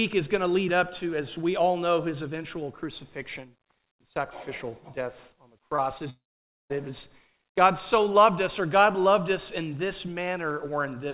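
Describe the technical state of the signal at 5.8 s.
At 5.76 to 5.80 s there is a short concealed packet loss: about 20 ms never arrived, and the receiver synthesised 19 ms by extending the preceding sound before crossfading back. It sounds like a brief smear or wobble; a spectrogram shows a smoothed, repeated patch below the call path's 4 kHz ceiling.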